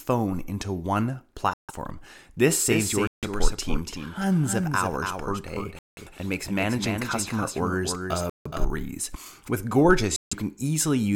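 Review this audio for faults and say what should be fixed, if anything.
Bluetooth stalls cut the speech to dead silence five times: at 1.54 s just after "into one", 3.07 s, 5.79 s, 8.30 s and 10.16 s, each gap about 150 to 180 ms, the longest at 5.79 s. A waveform shows flat silent strips and a spectrogram shows blank vertical bands before the speech resumes. Radio interference likely delayed packets until the headphone buffer emptied. Move the devices closer, clear the 2.4 GHz band of competing traffic, or use a wired connection.

A doubled audio track runs from 2.71 s to 8.65 s: a full-band copy of the speech trails roughly 300 ms behind at about 5 dB lower, with no reverb tail, and switches on and off abruptly. A spectrogram shows every syllable repeated as a fainter, time-shifted twin, and on the waveform the envelope gains echo bumps that end sharply at 8.65 s. The likely cause is a second, slower capture path mixed into the output. 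Mute the duplicate monitoring or loopback route so only one copy reaches the mix.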